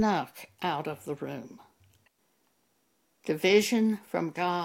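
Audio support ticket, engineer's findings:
Speech signal checked across the whole clip: no dropouts, distortion, level jumps or timing faults found, so no component or mechanism to flag.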